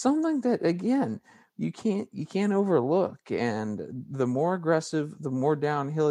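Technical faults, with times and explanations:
No technical faults are present in this speech recording.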